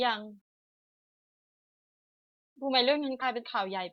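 At 3.21 to 3.23 s the speech jumps forward. This is compressed frames skipped: whole frames never reached the output, either missing or rejected as damaged by the decoder. About two frames vanish, roughly 40 ms, which fits 20 ms frames.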